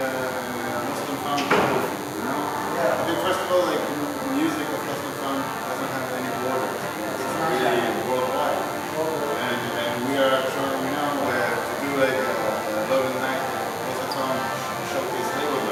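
From the first moment to the end there's a DECT cordless phone buzz running under everything, sitting something like 15 dB below the main sound. A DECT handset or base nearby is firing off a short radio burst every 10 ms, and the audio circuitry is rectifying those bursts into the signal. What you get is a thin, steady buzz at 100 Hz, edgy and harmonic-rich rather than a smooth hum.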